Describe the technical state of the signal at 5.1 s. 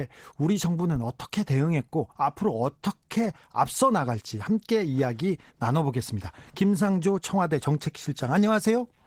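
At 5.1 s the speech carries Opus voice compression, present for the whole clip. The damage is plainly audible: the voice sounds hoarse and slightly robotic, which points to a low bitrate around 16 kbps. The sound suggests a hybrid split, with linear-prediction coding below 8 kHz and a thin transform layer above it, each 20 ms frame getting coarse excitation. On a spectrogram the upper band looks patchy and smeared, with blocky texture changing every 20 ms.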